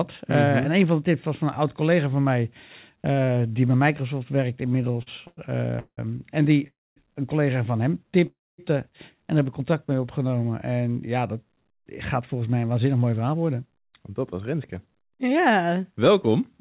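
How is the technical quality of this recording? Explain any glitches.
The recording is a narrowband speech call, with nothing above 4 kHz (consistent with telephone-grade coding), and it has several timing glitches caused by late-arriving packets.

From 4.66 to 5.39 s there are repeated stalls (stutter): ten brief gaps, the longest 98 ms, patched by continuing the previous sound. Unlike a single freeze, it drags and judders in many small steps.

There are call audio freezes at 5.79–5.99, 6.67–6.98 and 8.27–8.60 s. Each is likely a packet hold-up that emptied the jitter buffer. The last sound is extended into a fading buzz, then silence lasting about 0.08, 0.23 and 0.24 s, before the audio resumes intact. Each is one longer hold, not a stutter.

From 9.71 to 10.29 s there is a jitter buffer slow-down. Repeated pitch periods add 58 ms, so speech runs at 91% speed with unchanged pitch and sounds drawn out.

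From 11.76 s to the end there is a jitter buffer speed-up. Trimmed pitch periods remove about 0.4 s, so speech runs at 108% speed with unchanged pitch and sounds hurried rather than stretched.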